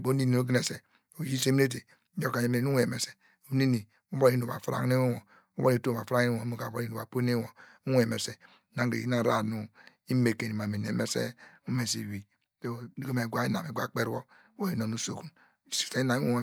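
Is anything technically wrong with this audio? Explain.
No, nothing technically wrong stood out on listening to this speech recording.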